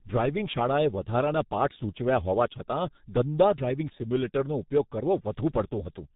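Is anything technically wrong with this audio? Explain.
Yes, the speech has passed through a low-bitrate telephony codec. G.723.1 codec damage runs through the whole clip. The codec models the voice in 30 ms frames and updates that model slowly, so fast changes between sounds get smeared. Nothing above 3.8 kHz survives. The damage is heavy: the voice sounds muffled and hoarse, and consonants blur into one another, which points to a bitrate of roughly 6 kbit/s.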